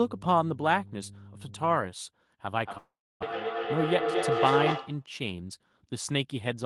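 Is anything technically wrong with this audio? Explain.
Yes, there are three problems, and two of them overlap in the middle of the clip.

From the start to 1.77 s there's mains hum, a steady 50 Hz tone sitting about 15 dB below the speech. It's the power line leaking into the signal, probably through a ground loop or a nearby transformer, and you hear it as a low drone under everything.

From 2.49 to 5.11 s there's a feedback howl. Two devices in the same room are on the call, so the sound loops from speaker to mic and gets louder on each pass. It narrows to a tone around 500 Hz, with repeats roughly every 200 ms, and peaks at about speech level.

Inside that, from 2.77 to 3.24 s, the audio drops out. The last sound is stretched into a fading buzz or hiss, followed by about 0.31 s of silence. Around 0.4 s of audio never plays, and it picks up again a bit further on. A long network dropout is the likely cause.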